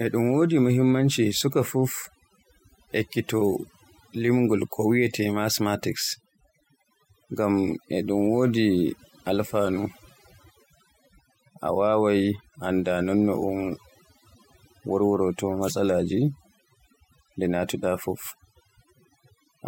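From start to finish, the background sits in near silence scattered with twinkling specks. This is overdone noise removal: a noise reducer set too hard has cut individual frequency bands whenever they neared its noise estimate, taking quieter parts of the speech away too.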